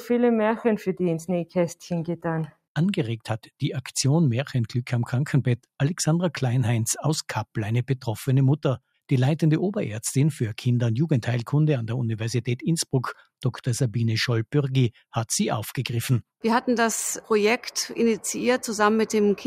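No technical faults can be heard anywhere in the recording; the signal stays intact and continuous throughout.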